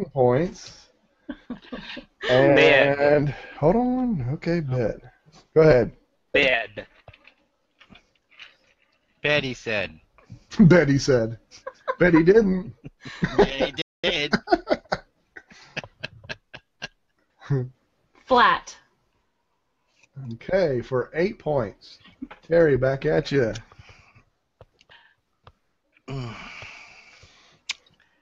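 The audio cuts out abruptly at 13.82 s and stays completely silent until 14.04 s, a gap of about 220 ms, before resuming. This is a playback stall. The player's output likely ran dry, either because it ran out of buffered data or because its playback thread was briefly blocked, so nothing reached the output until it recovered. From 14.04 s to 14.90 s the sound is hurried but keeps its normal pitch. This is time-compressed catch-up following the stall. To work off the backlog that built up during the silence, the player removes short slices of audio and cross-fades across the joins, running at about 1.25 times normal speed for under a second.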